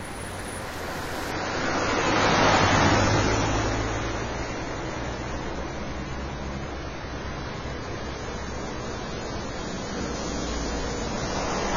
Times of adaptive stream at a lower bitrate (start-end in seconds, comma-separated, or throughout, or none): 1.31-11.76